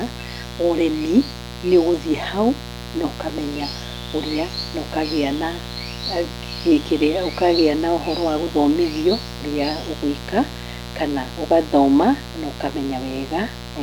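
Speech runs the whole way over a steady, raspy mains buzz at 60 Hz. Its harmonics extend into the kilohertz range, sitting roughly 10 dB below the speech, from switching spikes leaking in twice per mains cycle.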